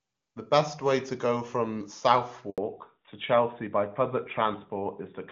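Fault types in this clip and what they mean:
Handover gap: At 2.50 s the sound simply drops out for about 80 ms, going quiet until 2.58 s, which is what you hear when a call gets passed from one network to another and no speech frames make it through during the switch. Whatever was said in that short window is gone for good; the new link only picks up again right at the end of the silence.
Fallback to narrowband: Right after the gap, from 2.58 s to the end, the top of the spectrum is cut off, with nothing left above 4 kHz. The call has dropped out of HD Voice onto an older narrowband codec, in contrast with the crisp wideband first half, which fits AMR-WB at its top rate. From here the speech sounds duller and rougher, much like AMR-NB at 12.2 kbit/s.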